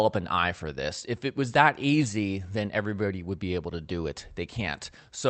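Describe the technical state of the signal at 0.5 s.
At 0.5 s the audio is intact, with no fault at that moment.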